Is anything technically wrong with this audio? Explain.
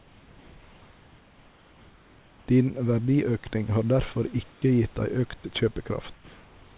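Yes, there are two kinds of fault in this speech clip, which comes through a call path that keeps nothing above 4 kHz.

Comfort noise in place of the background, at 4.52 to 4.62 s and again from 6.14 s to the end: the sender likely stopped transmitting during pauses, so the receiver filled them with synthetic noise. The real room background gives way to a flat, featureless hiss, about 6 dB quieter in the first gap and about 2 dB quieter in the second.

Sound dropped by the voice detector, at 5.40 to 5.44 s: the detector likely mistook part of the sound for background and cut transmission. About 20 ms of speech is lost, and a brief 40 ms patch of comfort noise replaces it before the speech resumes.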